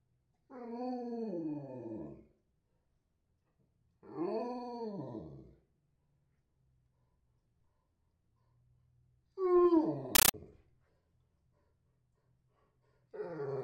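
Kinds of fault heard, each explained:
Compressed stream played as audio: from 10.15 to 10.34 s, undecoded AC-3 data, consistent with a 640 kbps stream, plays as harsh, loud static. The waveform shows 13.3 ms noise bursts separated by flat silence, 31.25 times per second. The spectrogram shows broadband vertical stripes.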